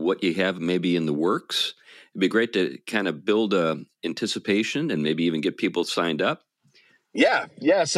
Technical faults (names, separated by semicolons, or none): none